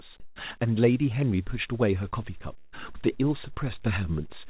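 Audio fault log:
0.20–0.36 s, comfort noise in place of the background: for 160 ms the quiet background turns flat and featureless, about 3 dB softer, likely from the receiver substituting synthetic noise during a transmission pause.
2.23 s, DC step: a low thump as the waveform's zero line jumps and stays offset to the end, while the speech carries on unchanged.
2.58–2.74 s, burst of packet loss: about 140 ms of speech is missing, bridged by a fading held sound as the receiver extended the last audio before resuming further on.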